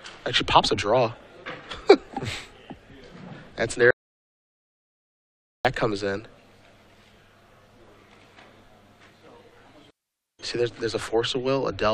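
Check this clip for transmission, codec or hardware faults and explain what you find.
There is one fault, an audio dropout to silence from 3.91 to 5.65 s. The sound cuts out mid-flow and returns 1.74 s later. The gap is silent, with no room tone. The input was likely lost while recording went on. That stretch of audio is gone.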